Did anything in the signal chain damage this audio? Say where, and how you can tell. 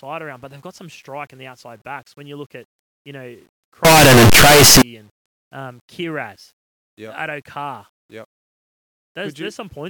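Yes, at sample-format conversion. From 3.85 to 4.82 s, after "look at you know" until "and um", the speech turns very loud and harsh, with quiet parts as loud as the rest. It's likely signed and unsigned mixed up: the flipped top bit makes every zero crossing jump across the full range.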